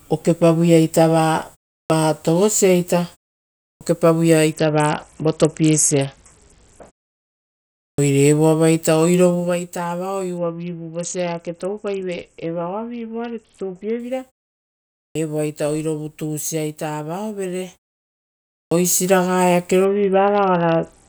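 Speech, with five clipped starts after a pause at 1.86, 3.77, 7.94, 15.11 and 18.67 s. Each follows a silence of 0.4 to 1.1 s, and about 40 ms of the onset is missing, so the sound bursts in abruptly. On the waveform, each onset jumps in with no rise. This points to an output device that slept during the silence and was still waking. A Bluetooth SBC bit pool drop dulls and roughens the audio from 4.53 to 6.92 s, from 10.37 to 14.00 s, and from 19.85 s to the end. The top frequencies vanish and a gritty noise floor rises, which fits the bit pool falling from 31 to about 7, near 61 kbps, on a congested link. A spectrogram would show the upper band emptying and grainy speckle across the remaining bands. Zipper noise rides on two level moves made in 2 dB steps with no smoothing. The first, from 9.28 to 9.60 s, goes down roughly 10 dB at about 20 steps per second and sounds like a fast zipping. 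The second, from 17.56 to 19.12 s, goes up roughly 10 dB at about 4 steps per second, heard as distinct ticks. Each step shows as a faint vertical line on the spectrogram and a small staircase in the waveform envelope.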